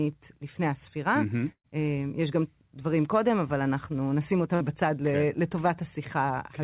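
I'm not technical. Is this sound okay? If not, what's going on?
No. There are two bursts of packet loss. At 1.52 to 1.67 s, about 120 ms of speech never arrived. The call stretched the last sound, faded it, went briefly quiet, then jumped ahead. At 4.55 s, about 60 ms vanished; the call stretched and faded the last sound, then jumped ahead.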